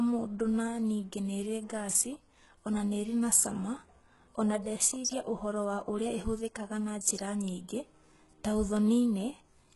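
Throughout the speech, the upper band sounds synthetic: s sounds turn gritty and metallic, and nothing reaches above 11.5 kHz. The cause is likely HE-AAC compression. Treble copied upward from lower bands explains the bright but misaligned top, unlike a plain low-pass that dulls. The heavy damage fits a stream near 12 kbps.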